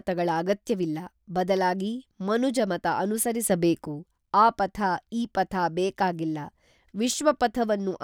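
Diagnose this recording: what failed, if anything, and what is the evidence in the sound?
Sudden gain jump from 3.50 to 3.87 s: speech and background noise rise together by about 5 dB, likely a digital gain step applied without a ramp.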